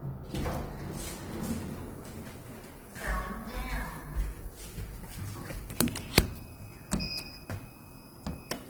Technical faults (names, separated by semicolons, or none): Opus compression